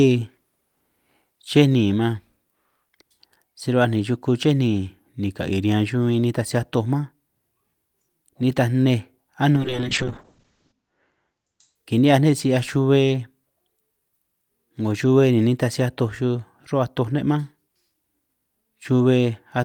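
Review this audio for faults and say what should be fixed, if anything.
A call bitrate drop runs from 9.56 s to 11.81 s. The connection's bandwidth estimate fell, so the encoder was pushed to a far lower rate, which fits a fall from about 40 kbps to 8 kbps. It codes the speech more coarsely and rough, watery artefacts appear. It also cuts the audio band from 20 kHz to 8 kHz, making the speech muffled. The worst stretch lasts about 1.2 s. On a spectrogram, everything above 8 kHz goes blank, then returns after 11.81 s. The waveform shows little change. To prevent it, give the call more network headroom and tune bandwidth estimation so the encoder steps down gently rather than dropping abruptly.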